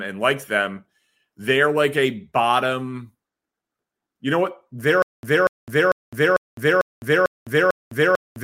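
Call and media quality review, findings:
Stutter with silent gaps, 5.02 s to end: a 239 ms speech fragment repeats seven times with 208 ms of digital silence between; likely a stalled stream replaying its last buffer.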